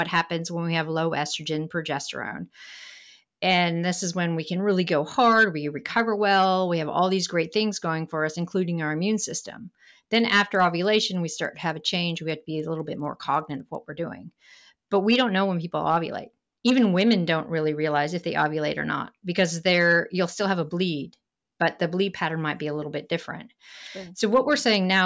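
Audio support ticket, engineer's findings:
Regular 20 Hz ticking, 10.15 to 13.8 s, present only with signal. Likely cause: resampler restarted on every block, 50 ms blocks, each converted without its neighbours, leaving an error at every edge. Fits a 24 kHz to 16 kHz conversion.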